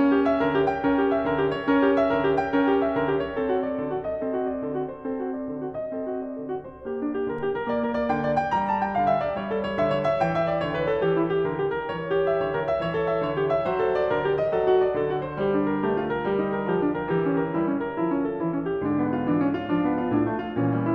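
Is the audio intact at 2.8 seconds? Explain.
Yes, the music is intact at 2.8 seconds, with no audible fault at that moment.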